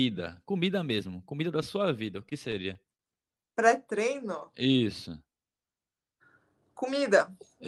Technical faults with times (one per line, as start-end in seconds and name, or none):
2.29-3.01 repeated stalls (stutter)
4.21-4.85 jitter buffer slow-down